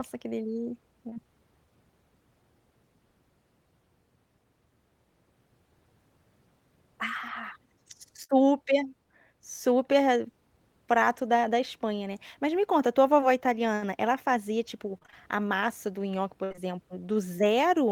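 Short concealed packet loss hits this speech at 1.09 to 1.18 s, 13.21 s and 16.52 to 16.59 s, where brief holes are patched by extending the preceding sound, leaving small smears or wobbles. A burst of packet loss at 8.24 to 8.31 s and 16.44 to 16.52 s drops about 60 ms each time, bridged by a fading continuation before the audio jumps ahead. Repeated packet loss (robotic sound) at 14.98 to 15.14 s brings four closely spaced gaps, about half the stretch synthesised, giving a choppy quality.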